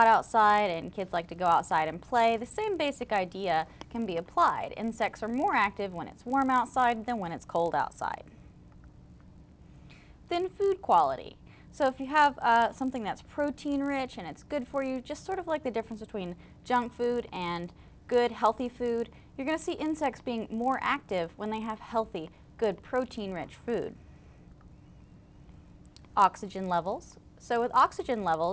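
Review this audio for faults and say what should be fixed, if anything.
A resampler restarted on every block runs from start to finish. The converter, which points to a 48 kHz to 16 kHz conversion, treated each 20 ms block as standalone, so at every edge it filtered against missing or wrong neighbouring samples and left a small error. With blocks that short, the errors repeat at 50 per second and merge into a steady 50 Hz buzz that rides on the audio and drops out whenever there is no signal. To prevent it, keep the resampler's filter state between blocks so each edge is computed from the true neighbouring samples.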